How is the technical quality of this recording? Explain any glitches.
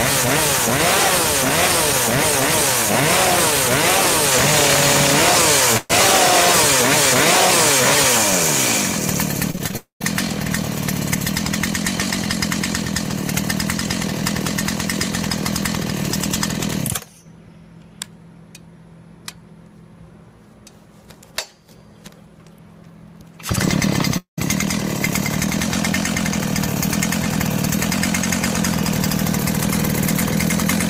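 The recording has audible network-related glitches in three places, all typical of packet loss on a real-time audio link.

At 5.77 to 5.92 s, a burst of packet loss removes about 120 ms. The receiver extends and fades the last sound before the audio skips ahead.

From 9.52 to 10.05 s, repeated packet loss produces choppy, robotic sound. Six short gaps, the longest 18 ms, are each patched by continuing the preceding audio.

At 9.77 to 10.02 s and 24.17 to 24.39 s, the sound fades into roughly 130 ms and 120 ms of silence, then resumes with about 240 ms and 200 ms missing. This is likely a long network dropout.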